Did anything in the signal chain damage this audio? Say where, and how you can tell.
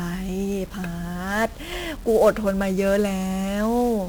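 Yes, at the codec stage: 1-bit DFPWM compression fuzzes and crackles the speech from start to finish, with the treble buried under hiss. Each sample's single bit only nudges an adaptive level up or down, so heavy broadband quantisation noise fits a roughly 48 kbps one-bit stream. That constant fizz, rather than swirly, watery artefacts, distinguishes it from a starved perceptual codec.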